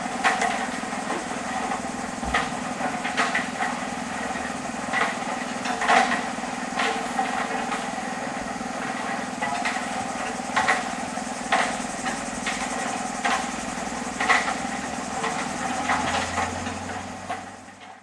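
No technical faults can be heard anywhere in the audio; the signal stays continuous and steady throughout.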